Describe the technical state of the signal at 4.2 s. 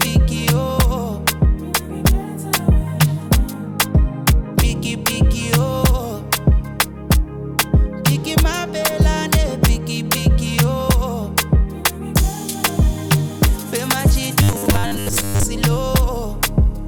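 The signal at 4.2 s is intact, with no dropout, clipping, glitch or other technical fault audible at that moment.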